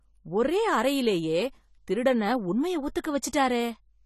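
From start to finish the speech sounds dull and smeared, with nothing above 14.1 kHz and a warbling, fizzy texture on sibilants and held sounds. The likely cause is AAC compression, with a sound that points to AAC-LC at a low bitrate such as 32 kbps. The encoder has discarded detail it judged inaudible and left gaps in the spectrum. Unlike a plain low-pass filter, which only dulls the top end, this also makes sibilants fizz and warble.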